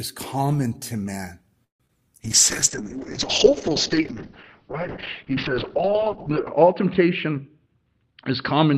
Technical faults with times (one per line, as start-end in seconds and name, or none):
1.64-1.81 call audio freeze
1.86-1.90 short concealed packet loss
2.24-8.78 call bitrate drop
7.25-8.72 jitter buffer speed-up